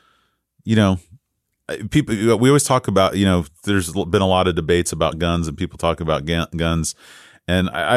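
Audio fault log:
Nothing stood out on listening to this speech recording.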